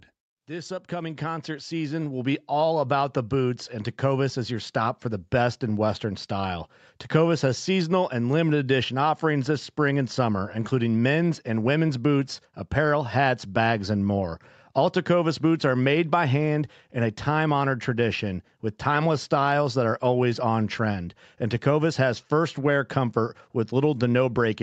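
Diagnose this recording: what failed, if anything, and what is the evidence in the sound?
From 0.46 s to 2.77 s the speech and the room noise behind it swell together, climbing steadily by about 11 dB rather than jumping. This is automatic gain rising in the call processing stage: the gain control judged the opening level too quiet and raised its gain gradually, lifting everything in the signal at once. The ramp sits on a top end that stops near 8 kHz, consistent with the call codec's bandwidth.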